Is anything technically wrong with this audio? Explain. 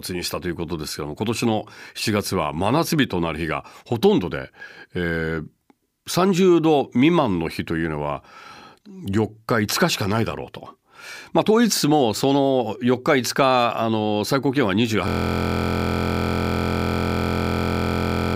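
Yes. From 15.08 s to the end, a system hang loop takes over: the driver froze while the hardware kept replaying one 23.22 ms buffer, which fits 1024 samples. That scrap of speech repeats about 140 times, becoming a steady 43.1 Hz buzz.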